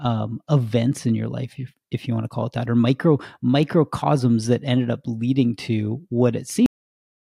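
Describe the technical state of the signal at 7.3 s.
At 7.3 s there is only digital silence: a cut-off end. After "up leading to what", the speech stops dead at 6.66 s because the final buffers were never written, and nothing is heard from there to 7.36 s. The waveform drops abruptly to a flat line with no decay, and the spectrogram goes completely blank.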